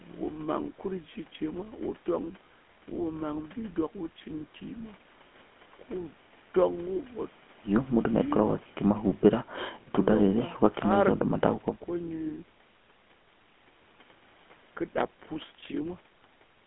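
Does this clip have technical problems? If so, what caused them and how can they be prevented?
Yes. Throughout the speech there is the buzzy, gravelly roughness of a GSM full-rate codec. It models the vocal tract and drives it with a coarse, regularly spaced pulse excitation, which fits a 13 kbps rate. Unlike plain telephone band-limiting, which only muffles, the 200 Hz to 3.4 kHz band itself sounds grainy and rasping. Prevent it by carrying the call over a wideband codec such as AMR-WB or Opus instead of the legacy GSM path.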